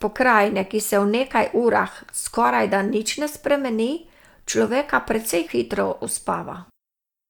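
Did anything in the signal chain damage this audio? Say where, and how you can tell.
No, nothing along the chain has left a mark on this speech recording that I can hear, so there's no stage to point at.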